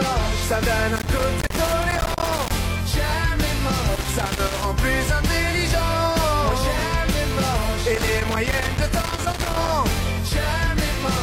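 A worn or dirty contact making and breaking as it moves, a loose connector crackle, chops the signal into irregular scratchy bursts at 0.96–2.51 s, 3.95–4.65 s and 7.94–9.74 s.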